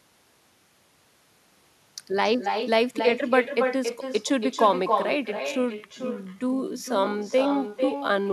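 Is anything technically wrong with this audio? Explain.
Yes, two problems. Throughout, there's echo with no canceller: the far end's loudspeaker feeds its mic, so every phrase returns around a third of a second later, only about 6 dB down, and thin. From 5.32 s to the end there's a time-stretched section, slowed to 0.62x with pitch unchanged, so it drags, likely from software padding it to length.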